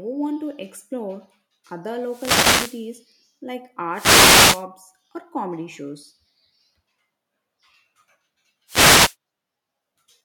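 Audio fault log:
1.99–2.93 s, 3.92–4.66 s, 8.67–9.16 s: wireless microphone noise hit. Swishing static bursts come in, first after "to explore other", second ending before "or comedy shows". The analogue FM microphone's radio signal fades as reflections cancel, so receiver noise rises.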